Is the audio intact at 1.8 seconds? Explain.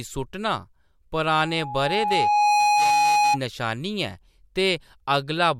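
No. At 1.8 seconds the speech is covered by loudspeaker feedback squeal, which runs from 1.35 to 3.38 s. A microphone is hearing the loudspeaker it feeds, and at 834 Hz the loop gain passes one, so that tone feeds on itself. It takes about a second to swell, so at 1.8 s it is still rising toward roughly 5 dB above the speech. Unlike a steady interfering tone or hum, it grows from nothing into a single howling pitch.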